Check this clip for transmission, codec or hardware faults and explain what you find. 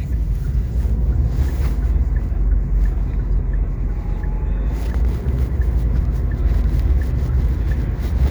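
Hard clipping occurs three times: 1.09–1.42 s and 1.97–2.83 s, about 2 dB over, then 6.46–7.46 s, about 3 dB over. Peaks exceed what a stage can pass and are cut flat, adding high harmonics heard as crackle on loud moments. Unlike gentle saturation, the edge is abrupt and brittle.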